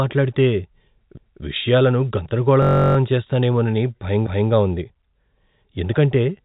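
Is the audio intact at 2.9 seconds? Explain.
No. A system hang loop runs from 2.62 to 2.97 s. The system stalled while the sound hardware kept replaying one 21 ms piece, which fits a 1024-sample buffer, 16 times over. It sounds like a steady buzz at about 47 Hz.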